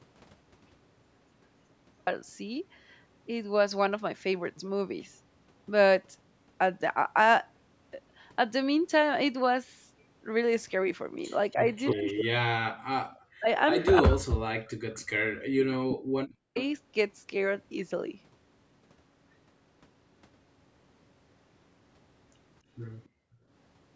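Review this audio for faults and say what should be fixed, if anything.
Audio dropout to silence runs from the start to 2.07 s, silence with no room tone, likely a lost input rather than a quiet passage. Prevent it by checking the input link before recording.

Echo leak appears at 11.51–12.23 s, 13.79–13.85 s and 15.9–16.62 s: a copy delayed by 284 ms, about 5, 20 and 10 dB below the speech. Its fixed delay separates it from room reverberation. Prevent it with headphones or a better-tuned echo canceller.

Speech suppressed in double talk, likely, dips the talker by up to about 40 dB across 11.53–15.11 s and 15.82–16.58 s. The talker's own voice drops, not just the background. Prevent it with a canceller that tolerates double talk.

Background gated by the echo canceller briefly drops only the room sound, by about 40 dB, at 15.4–15.51 s and 23.08–23.48 s. Prevent it by easing the canceller's residual suppression.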